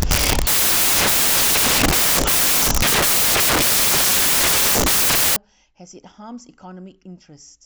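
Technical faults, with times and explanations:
0.00–5.36 s, samples built from the wrong bytes: each sample's bytes are combined out of place, so the rapidly fluctuating low-order bits land in the most significant position and the speech becomes loud, harsh broadband noise.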